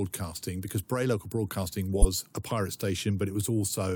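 At 0.68 s a corrupt frame was decoded: a single damaged frame played anyway, leaving a short burst of misplaced energy, fairly quiet at about -35 dBFS. Between 1.97 and 2.05 s compressed frames were skipped, so roughly 40 ms of speech vanishes and the audio jumps ahead at the join.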